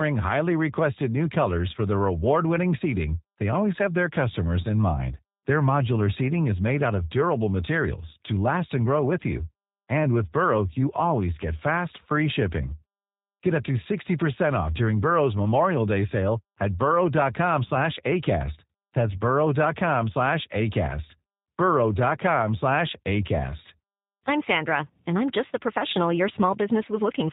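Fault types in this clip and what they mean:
G.729 codec: The speech has passed through a low-rate telephony coder that keeps no real audio waveform. Each 10 ms frame is rebuilt from a vocal tract filter, a pitch predictor and a handful of pulses, at what sounds like 8 kbit/s. The damage is plainly audible. The speech stays intelligible but has a rough, synthetic buzz, and nothing survives above 4 kHz. That combination of a hard bandwidth ceiling and a model-driven rasp sets it apart from simple band-limiting or waveform codecs.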